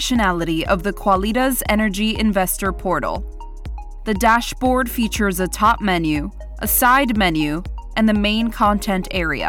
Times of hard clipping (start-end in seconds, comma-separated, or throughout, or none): 1.12-1.14, 4.25-4.36, 5.64-5.72, 6.79-7.24, 8.63